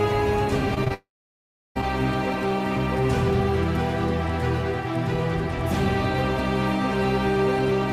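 The audio has two kinds of fault, both early. Short concealed packet loss occurs at 0.74–0.78 s, then at 0.84–0.88 s and 0.88–0.92 s back to back. Each time about 20 ms failed to arrive, and the receiver patched the gap by extending the preceding sound. The result is brief smears or wobbles. A long network dropout follows at 0.94–1.77 s. The sound is stretched into a fading buzz or hiss for about a tenth of a second, then goes silent for roughly 0.7 s before resuming. That stretch of audio is simply lost, likely because no packets arrived for over 0.8 s.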